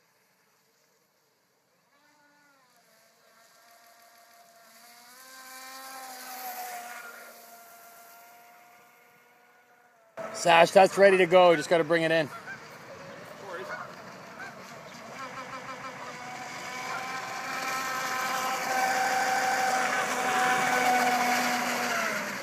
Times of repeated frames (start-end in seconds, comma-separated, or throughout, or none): 3.76-4.39, 7.71-8.10, 15.36-15.99, 19.05-19.67